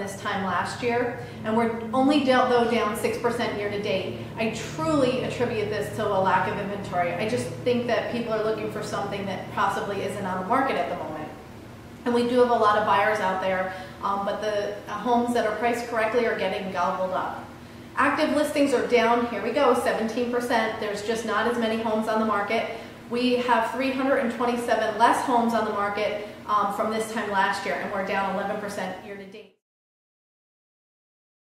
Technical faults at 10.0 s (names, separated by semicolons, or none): none